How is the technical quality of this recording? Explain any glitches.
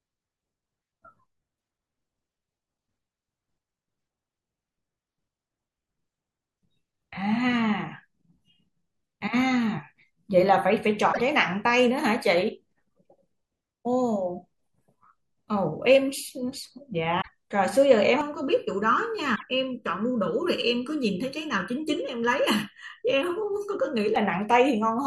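The recording has two kinds of fault in this speech.

At 11.12 to 11.20 s, 17.20 to 17.29 s and 19.35 to 19.43 s, the sound jumps ahead. Each glitch lasts about three 26.1 ms frames, likely from a broken MP3 bit reservoir.

From 18.21 to 24.16 s there is channel delay with comb filtering. One channel lags by under a millisecond. Summed, they cancel at evenly spaced notches starting around 700 Hz, sounding hollow and phasey.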